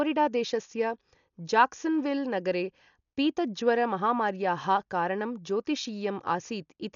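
Dolby Digital compression likely causes the heavy damage throughout: nothing above 7 kHz, dull speech, and rough dither noise fluttering around tones, which fits a bitrate near 48 kbps.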